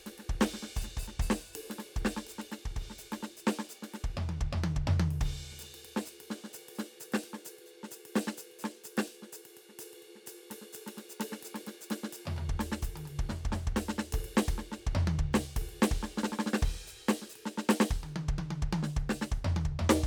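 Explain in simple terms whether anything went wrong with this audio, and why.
Nothing went wrong with this music recording that a listener can pick out. At no point does anything break off or stand out as a problem.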